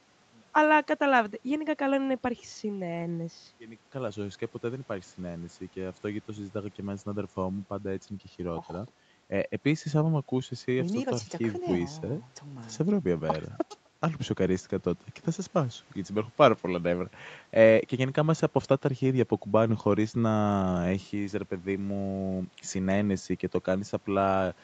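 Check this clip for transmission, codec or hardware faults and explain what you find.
Nothing in this speech points to a transmission, codec or hardware problem; the high end stops around 8 kHz, which is normal for this kind of call path.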